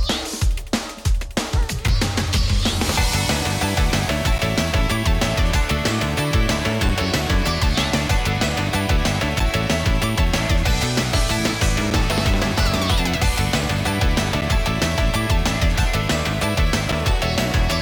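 The audio is broken by a gap between chunks, repeating at regular intervals. Short holes with hard edges appear at 1.88, 4.38, 6.89, 9.40, 11.90, 14.41 and 16.92 s. Each lasts about 7 ms. They recur roughly every 2.5 s. That spacing points to audio delivered in 2.5-second blocks, with silence inserted at each join. No sound is lost. The flow is simply interrupted at every boundary.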